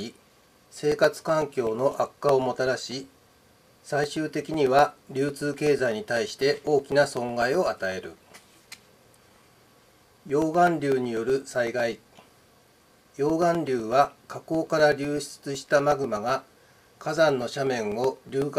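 From 0.17 s to 18.42 s, periodic USB or driver dropouts recur every 0.125 s, about 150 in total. Each time, something blocks the audio path and roughly 2 ms is replaced by silence, giving a steady eight-per-second ticking heard only while sound is present.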